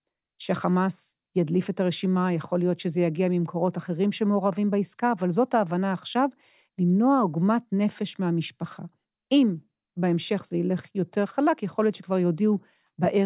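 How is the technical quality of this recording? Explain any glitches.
The speech recording has no audible glitches. There is nothing in it that calls for an explanation.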